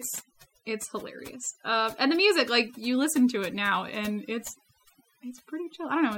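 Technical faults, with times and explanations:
Throughout, overdone noise removal: the noise reduction was set too strong, cutting individual frequency bands down or out whenever they sat near its noise estimate. Quiet parts of the speech vanish with them, leaving near-silent gaps with twinkling specks.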